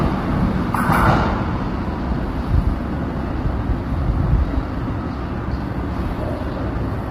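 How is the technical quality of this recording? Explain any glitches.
The recording is heavily degraded by coding damage throughout. This is likely low-delay AAC compression (AAC-ELD): its short frames resolve harmonics poorly, leaving grainy noise between them and a thin, synthetic top band, consistent with roughly 24 kbps.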